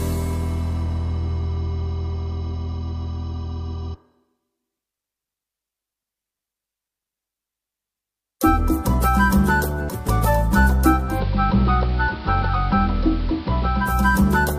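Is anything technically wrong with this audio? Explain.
Yes. From 11.05 to 13.96 s there is digital radio blending to analogue: the receiver lost its digital stream, cross-faded over 175 ms to the AM broadcast, then returned. The sound turns dull, drops about 2 dB, and gains hiss roughly twenty decibels down. A spectrogram shows the treble cut off, over a raised noise floor.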